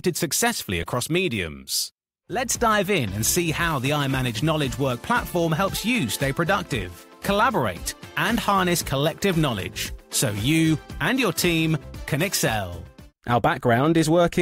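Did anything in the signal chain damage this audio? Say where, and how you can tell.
Yes. A corrupt frame was decoded at 0.82 s, in the codec's decoding stage. A brief chirp-like blip of misplaced energy peaks around -20 dBFS and doesn't belong to the surrounding sound. Bits inside the compressed data were flipped, and the decoder played the damaged frame anyway. It read wrong gain or spectral codes and put energy at the wrong frequencies. The burst is so short that it fits a couple of consecutive frames being hit.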